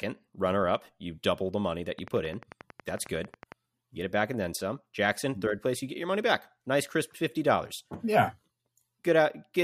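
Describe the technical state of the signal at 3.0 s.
At 3.0 s the speech is overlaid by a steady ticking, a train of clicks running from 1.99 to 3.53 s, just after "double the money that." About twenty similar clicks arrive regularly at 11.1 per second, peaking roughly 5 dB above the speech, likely from interference or a faulty connection.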